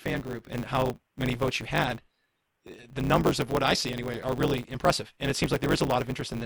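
Block size mismatch (truncated) throughout this speech: block tails are dropped, which fits 512-sample blocks, causing a 100 Hz buzz and 1.16 times faster playback with the timbre kept.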